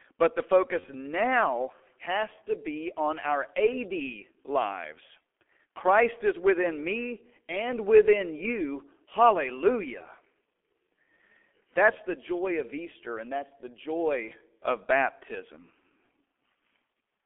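From the first moment, the speech comes through the G.723.1 codec at around 6.3 kbit/s over a narrowband line of 250 Hz to 3.4 kHz, and it's heavily damaged. The voice sounds muffled and a bit hoarse, and consonants smear together. That's because the codec describes the voice in coarse 30 ms chunks and only updates its model of the vocal tract slowly, and at that bitrate a lot of detail simply doesn't survive.

At 0.80 s there's a dropout of VoIP packet loss concealed by the speech codec, running to about 0.86 s, just before "now has to be". The gap sounds like a single lost 30 ms frame. The decoder papers over it by repeating its last pitch and filter at falling gain, so you hear a short, fading smear. Because each frame builds on the previous one, the voice stays weak or distorted for a moment after the signal comes back.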